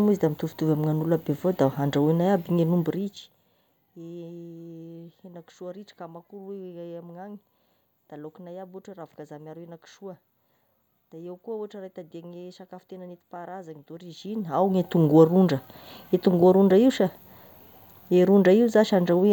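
Zipper noise from a gain control stepping in unsmoothed increments, about fifty a second: from 2.82 to 3.46 s the speech drops around 20 dB in 1 dB steps, and from 13.91 to 14.93 s it rises by a similar amount, each ramp carrying a fine ticking buzz.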